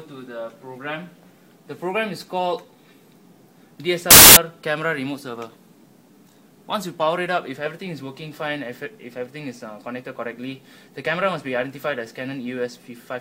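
A short stretch of audio breaks into loud, harsh broadband noise from 4.11 to 4.37 s, roughly a quarter of a second, before the signal returns intact. This is samples built from the wrong bytes: for that span the reader assembles each sample from misordered or misaligned bytes, so the rapidly varying low-order bits land in the most significant position and the waveform becomes noise-like hiss.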